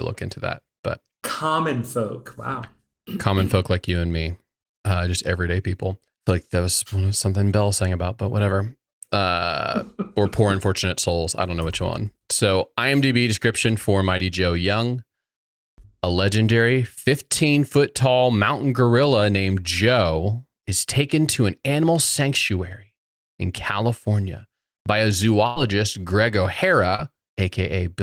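Just after "description for", at 14.17 to 14.21 s, there's a short concealed packet loss. About 20 ms of audio never arrived, and the decoder patched it by stretching the previous sound, so you hear a quick smear rather than a hole.

After "by a", from 25.47 to 25.58 s, a burst of packet loss drops roughly 100 ms. The receiver carries the last sound forward for about 92 ms while fading it, before the speech picks up again further on. Another short concealed loss follows at 26.96 to 27.00 s, again about 20 ms lost, with 23 ms filled in, heard as a brief wobble.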